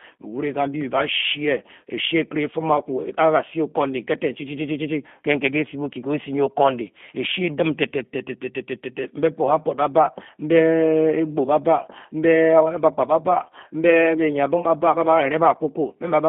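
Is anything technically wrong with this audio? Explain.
Yes. Throughout the speech there is G.729 codec damage. The band runs only from about 150 Hz to 3.5 kHz, but unlike a plain telephone filter the voice also sounds rough and synthetic, rebuilt from a vocal-tract model and sparse pulses, which fits an 8 kbit/s G.729A stream.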